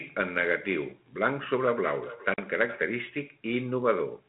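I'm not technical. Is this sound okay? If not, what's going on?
No. From 1.22 to 2.89 s there is feedback echo between two devices. Two phones or computers in the same room are on this call, and one speaker plays back what the other's microphone sent. That microphone hears it again and sends it round once more. Each piece of the speech comes back roughly every 0.4 seconds, fainter and thinner, sitting well below the speech itself.

At 2.34 s, during that echo, there is packet loss on an ADPCM call. About 40 milliseconds of sound went missing in transit and was replaced by silence, so you hear a sudden short gap. This kind of phone coding predicts each moment of sound from the last, so the receiving end briefly loses track. When the speech returns at 2.42 s it may click or sound slightly rough for a moment before settling. The phone coding itself has only a slight effect on the sound.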